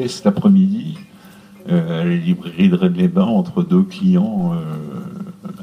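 A DC step at 4.39 s shifts the waveform's zero line by about -32 dBFS. It is heard as a single low thump while the audio continues unchanged. The offset then decays back toward centre as a 2 Hz high-pass drains it away.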